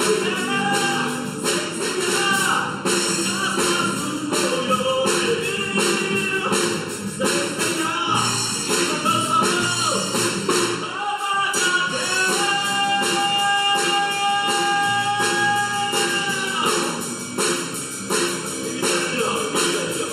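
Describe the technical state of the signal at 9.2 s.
At 9.2 s, as throughout, channel delay causes comb filtering: one channel lags by under a millisecond, cutting notches from about 700 Hz upward. The sound is hollow, and a spectrogram shows evenly spaced dark horizontal bands.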